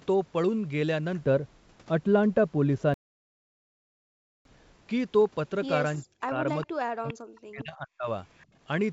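From 1.21 to 4.76 s the sound turns dull and muffled. This is de-emphasis applied wrongly. A treble cut meant to reverse pre-emphasis hit audio that never had it, or was applied twice. The top slopes away smoothly, about 11 dB down at 10 kHz relative to 1 kHz.

Inside that stretch, at 2.94 s, the audio stops dead. Silence lasts 1.51 s, until 4.45 s. This is a playback stall. The player likely ran short of data or was blocked, then resumed. The gap falls mid-flow, not at a natural pause.

From 6.03 to 6.46 s, and again from 6.66 to 8.08 s, the speech dips. This is speech suppressed in double talk. Both sides were likely talking at once. The echo canceller then pushed the near talker down, by roughly 40 dB at its deepest. About 0.4 s is affected in the first span and about a second in the second.

Short echo scraps appear at 6.62 to 6.66 s, 7.07 to 7.13 s and 8.38 to 8.44 s. This is echo leak. 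A loudspeaker echo likely slipped past a canceller and came back. Each scrap trails the original by 409 ms. The first two sit about 20 dB below the speech. The last is fainter, about 35 dB down.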